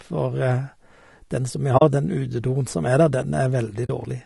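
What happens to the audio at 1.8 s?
At 1.77 to 1.82 s, between "den som vi" and "den utedoen som er", there is AAC frame loss with muting: compressed frames never reached the decoder, and it filled their spectrum with zeros. The length of the gap points to two frames, about 40 ms of audio. Because the overlapping transform windows still blend the neighbouring frames, the sound fades down into a brief silence and fades back up, a soft-edged hole rather than a hard cut.

Around that gap, and across the whole clip, the audio carries low-delay AAC compression damage, likely from AAC-ELD at a low bitrate that points to about 32 kbps. Its short frames track the pitch harmonics of the speech poorly, and with so few bits the encoder lets noise fill the spaces between those harmonics. The speech sounds plainly rough and grainy, and its top band has a thinned, synthetic quality.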